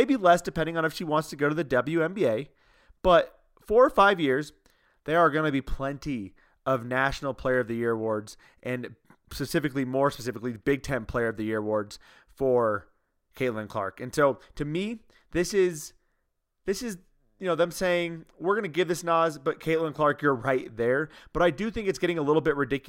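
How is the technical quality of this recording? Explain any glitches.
Nothing stood out as a technical problem when listening through this speech recording.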